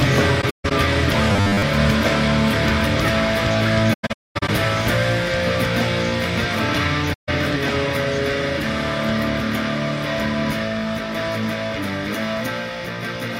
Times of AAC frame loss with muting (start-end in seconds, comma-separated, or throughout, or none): 0.41-0.72, 3.93-4.49, 7.13-7.29